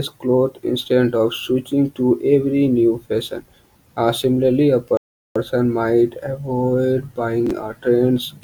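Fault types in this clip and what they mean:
rebuffering stall: The player ran out of downloaded audio after "similarly a" and paused until more arrived, leaving about 0.39 s of silence before resuming cleanly on "might avoid".
chunks out of order: A 10 ms chunk arrived three chunks late and played after its successors around 7.47 to 7.51 s, producing a brief jumbled moment after "might avoid".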